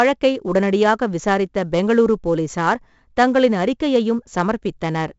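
A speech clip carrying 4-bit ADPCM compression from start to finish. Gritty hiss rides on every loud syllable and drops away in pauses, harsh on sharp attacks, with nothing above 7.7 kHz, which fits about 64 kbps at 16 kHz. Unlike MP3's swirling artefacts, this noise is broadband and level-following.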